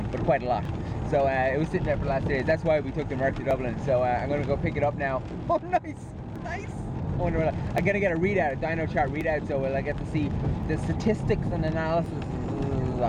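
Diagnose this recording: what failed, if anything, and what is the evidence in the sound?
The fault sits at the driver or buffer stage: a regular click recurs every 1.43 s from 0.65 s to 12.06 s, about ten in all, audible while signal is present. That strict periodicity points to clock drift buffer slips, likely from two devices running on independent clocks several hundred ppm apart, so the buffer periodically drops or repeats a small block of a few dozen samples. Network loss or dropouts would land at irregular times, not at a fixed interval.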